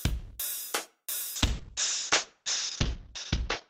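From 1.37 s to the end, a call bitrate drop coarsens and muffles the sound, fitting roughly 6 kbps; the spectrogram empties above 8 kHz.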